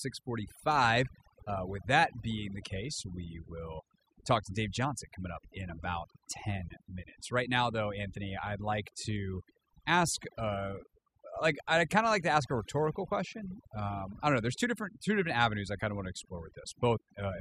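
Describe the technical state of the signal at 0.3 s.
At 0.3 s the speech is affected by overdone noise removal, which runs through the whole clip rather than starting or stopping here. The noise reducer is set so aggressively that any frequency band sitting near its noise estimate gets pulled far down or shut off, taking quiet parts of the voice with it. The result is a background that drops and breaks up into twinkling specks. Unlike a noise gate, which mutes everything at once, this fault removes bands individually.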